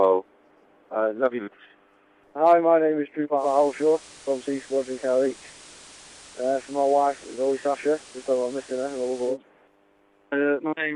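At 3.36 s you get a digital radio blend to analogue: the receiver loses the digital stream and cross-fades, over roughly an eighth of a second, to the station's FM broadcast. The level dips by about 1 dB and hiss rises to something like 20 dB under the programme, so everything turns noisier. It blends back to digital at 9.38 s, and the clarity returns.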